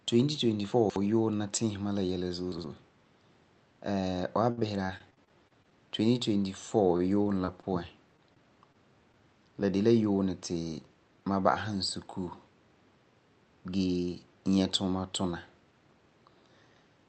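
Right at the start, from 0.72 to 0.96 s, there are chunks out of order. A 60 ms slice of speech lands three chunks late, so you get a jumbled moment just before "yuunɛ la tiisi ma". It happens again at 2.52 to 2.64 s, this time with a chunk just one slot late.

From 4.51 to 5.73 s there's repeated packet loss, the robotic sound. Eleven gaps, the longest about 59 ms, get patched by stretching the previous sound, so it turns choppy. A lighter patch of the same shows up at 6.97 to 7.65 s, with four short gaps.

Then there are two spots of short concealed packet loss, at 8.17 to 8.20 s and 8.72 to 8.76 s. About 20 ms never arrived each time, and the fill is a quick smear.

Mixed in with those come short stalls from a late packet, at 8.34 to 8.38 s and again at 9.12 to 9.16 s, just before "la de la yuunɛ". The buffer ran dry, so the sound hangs a beat too long with a slight buzz or dip, but nothing's lost.

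Last, from 10.73 to 11.23 s, there's a jitter buffer speed-up. The receiver snipped out around a twentieth of a second of pitch periods, so the speech runs about 8% fast at unchanged pitch and sounds a bit hurried. Throughout, the Opus call path's top end stops around 8 kHz.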